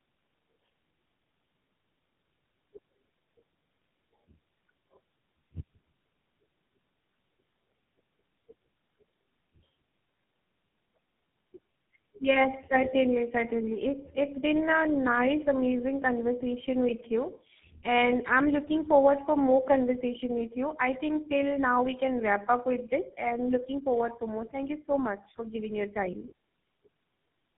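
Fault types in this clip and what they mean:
tandem speech coding: The call was decoded and re-encoded by three low-rate speech codecs in a row, ending on what sounds like GSM full rate, each coding the previous one's damaged output, so the speech is rough, muffled and warbly, with nothing above 3.8 kHz.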